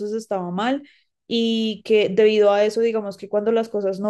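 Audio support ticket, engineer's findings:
No technical fault found in the speech recording. Nothing to trace to any capture, processing or playback component.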